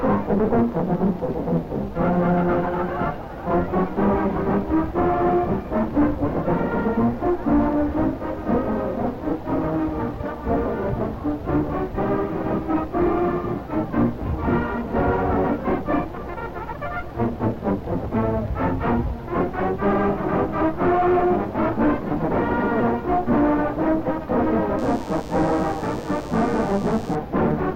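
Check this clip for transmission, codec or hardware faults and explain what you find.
One fault appears near the end. From 24.8 to 27.2 s a thin, steady 100 Hz buzz rich in harmonics sits well below the main sound: DECT cordless phone buzz, from radio bursts every 10 ms being rectified in the audio circuitry.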